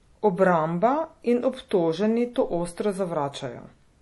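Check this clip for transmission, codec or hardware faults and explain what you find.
One fault runs through the whole clip. The speech sounds watery and swirly, with nothing above 11.5 kHz, likely MP3 compression at a low bitrate around 48 kbps, zeroing weak frequency lines and cutting treble.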